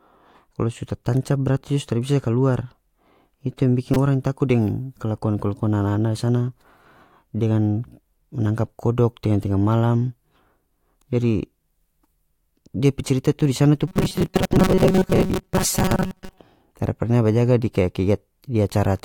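At 1.61 s there's a tiny click, a repeated buffer. A chunk of audio didn't arrive in time, so the device played the last piece once more. It's so short it reads as a tick rather than a stutter, which points to a buffer of around 5 ms, with roughly that much real audio lost. At 3.94 to 3.96 s the same repeated buffer fault happens again, but that piece plays four extra times. Back to back, those repeats give a brief buzz lasting about 20 ms, and about 20 ms of audio goes missing.

From 13.88 to 16.38 s the speech turns into a rigid, metallic buzz pitched at 188 Hz, while still roughly following the speech. This is robotic sound from repeated short buffers. The likely cause is new audio arriving too seldom, so the same few milliseconds get looped instead of the real signal, and most of the stretch is repeats. A 188 Hz pitch fits a loop of a little over 5 ms.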